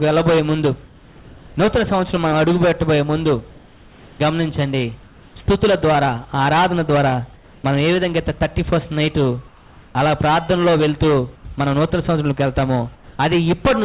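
In the pauses at 0.86–1.55 s, 3.50–4.19 s, 5.03–5.36 s, 7.34–7.64 s, 11.36–11.45 s and 12.95–13.19 s, the background flattens into a smooth, featureless hiss, level or up to about 5 dB quieter. This is likely comfort noise in place of the background: the sender stopped transmitting during the gaps, and the receiver filled them with synthetic noise shaped like the room. The whole clip stays within a band ending at 4 kHz.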